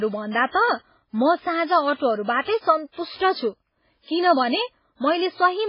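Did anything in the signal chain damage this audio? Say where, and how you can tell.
Yes. The damage sits at the codec stage and runs through the whole speech clip, with the likely cause being MP3 compression at a heavy setting. Nothing survives above 5.2 kHz, which a spectrogram shows as a hard, flat ceiling. Below it, weak frequency lines flicker on and off between frames, giving a watery, swirly texture and metallic chirps on s sounds. That starved bit budget fits a very low bitrate, around 16 kbps.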